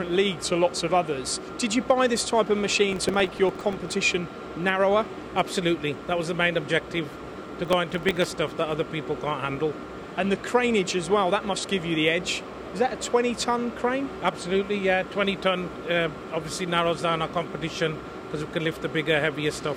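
Processor overload crackle at 2.93–3.93 s and 7.65–8.34 s: late buffers of a few milliseconds replay old audio, leaving dense vertical spectrogram streaks and jagged waveform steps.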